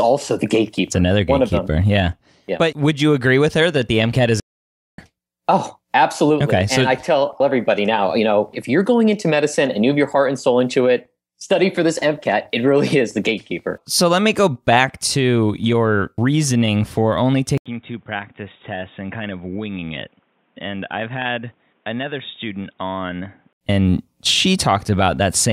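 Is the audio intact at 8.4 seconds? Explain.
Yes, the speech at 8.4 seconds plays through intact, with no audible fault at that moment.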